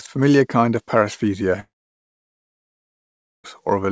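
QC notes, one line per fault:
1.60–3.46 s, long network dropout: the speech breaks off at 1.60 s, a brief fading buzz carries the last sound for under a tenth of a second, then about 1.76 s of silence follows before the audio resumes at 3.46 s with the intervening stretch missing. This is likely a gap in packet arrival, where the receiver's concealment extends the last sound, gives up, and the call path, band-limited to nothing above 8 kHz, plays silence instead.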